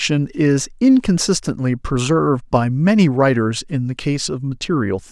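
Nothing in the recording stands out as a technical fault; the speech runs along without any dropouts, clicks, glitches or other disturbances to pick out.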